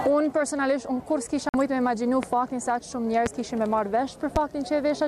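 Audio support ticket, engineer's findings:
Digital broadcast dropout, 1.49 to 1.54 s: about 50 ms of silence while the receiver muted failed frames, which fits two lost frames. The programme underneath is gone, not masked.

Loud pop at 2.23, 3.26 and 4.36 s: single sharp clicks roughly 15 dB above the sound, likely a voltage step from a switch or driver glitch. The sound continues underneath, so unlike the dropout nothing is lost.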